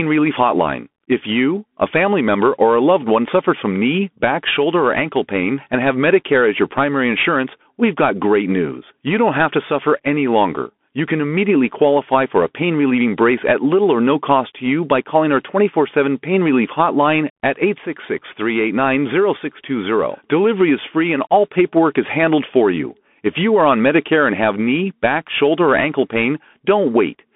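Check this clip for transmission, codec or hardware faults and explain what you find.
The speech carries a Bluetooth CVSD headset codec fault for the whole clip. CVSD sends one bit per sample, each saying only up or down, with an adaptive step, and the result fits a 64 kbps headset link. The line passes roughly 200 Hz to 3.5 kHz, and nothing above 3.8 kHz survives. Where loud high-frequency energy outpaces the step, the waveform turns slope-limited and distorted. S sounds go scratchy over a granular hiss. A spectrogram shows an empty band above 3.8 kHz.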